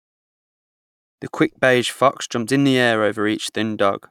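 Nothing to flag here: the speech eases in on a gentle editor's fade that starts around 1 s and is done by 1.19 s, with no click or hard edge, and nothing goes wrong after that.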